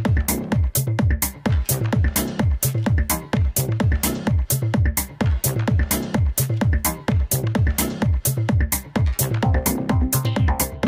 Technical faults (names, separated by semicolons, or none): none